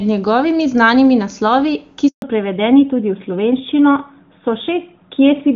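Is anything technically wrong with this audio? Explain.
Yes. The speech has two faults, and they are linked.

A handover gap runs from 2.08 to 2.22 s, lasting 140 ms. The call switched networks, and no speech frames arrived during the switch. The sound fades within a few tens of milliseconds and stays silent. Anything said then is lost.

A fallback to narrowband follows at 2.22 s and lasts to the end. Before it, the HD Voice wideband codec is clear, with faint codec damage at most, which fits AMR-WB at its top rate. After it, an older narrowband codec takes over. Nothing above 4 kHz remains, so the speech sounds duller and rougher.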